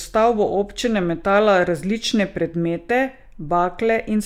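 No technical faults can be heard anywhere in the speech, and the signal holds steady throughout.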